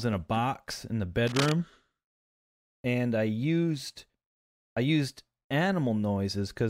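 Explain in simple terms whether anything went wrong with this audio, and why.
A burst of scratchy, rustling noise cuts across the speech from 1.27 to 1.53 seconds, right after "a box in the". This is cable scratch noise. It is fairly loud. The likely cause is a worn cable or connector being moved, so its electrical contact flickered rapidly.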